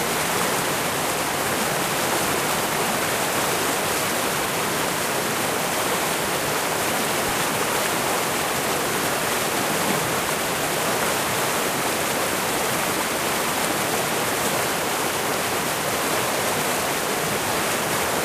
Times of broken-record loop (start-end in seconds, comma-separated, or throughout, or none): none